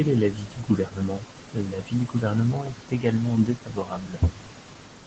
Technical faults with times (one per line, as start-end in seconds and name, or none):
none